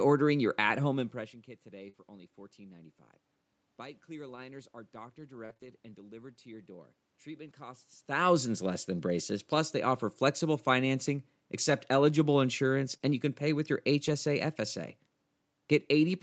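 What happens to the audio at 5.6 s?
Scattered short gaps run from 4.36 to 5.71 s, taking in 5.6 s. Packets arrived late or not at all, and the receiver patched each hole by extending the preceding sound. That leaves about three brief concealed breaks, the longest around 40 ms.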